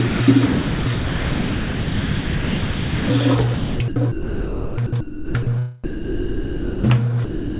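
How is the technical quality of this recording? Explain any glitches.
The recording is marred by repeated gaps where the sound is swapped for steady synthetic noise or near silence, and it carries nothing above 4 kHz, consistent with a narrowband G.711 mu-law call path.

Sound dropped by the voice detector occurs at 0.08–0.2 s, 5.84–6.84 s and 7.25–7.59 s. Each time, the sound gives way to one unbroken stretch of steady noise or near silence. The likely cause is a sender-side detector judging the sound as background, with comfort noise filling in until it triggers again.

Sound chopped by the voice detector runs from 0.46 to 3.1 s and from 3.54 to 5.47 s. Unlike the single clean dropouts, the sound repeatedly cuts in and out, likely because the detector toggled sending several times.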